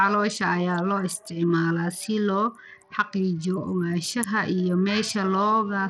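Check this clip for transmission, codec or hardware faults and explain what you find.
One codec fault runs through the whole recording. From start to finish the speech has a gritty, grainy noise riding on it, with the upper treble flickering in and out and nothing at all above 18.2 kHz. The likely cause is Bluetooth SBC compression. This codec splits the signal into a few broad sub-bands and hands out bits without a hearing model, so at a tight budget (which fits roughly 80 kbps) the top bands starve and the rest are coarsely quantised, leaving plainly audible damage.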